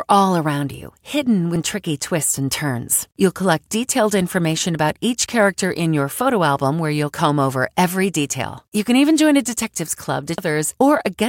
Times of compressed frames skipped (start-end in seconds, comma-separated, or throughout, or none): 10.38